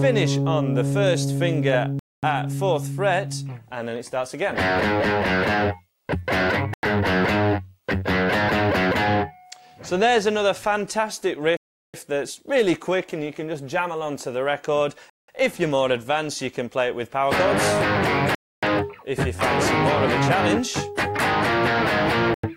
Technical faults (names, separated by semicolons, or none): block of digital silence